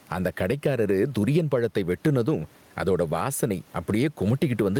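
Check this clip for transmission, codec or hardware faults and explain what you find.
The speech shows gain pumping throughout the clip. The likely cause is input gain set far too high for the microphone, with a fast limiter or compressor clamping the level down each time the speech gets loud. The gain swings by something like 10 dB, and the faint room noise sits far below the speech. Loud and quiet passages end up flattened toward one level, giving a squashed sound.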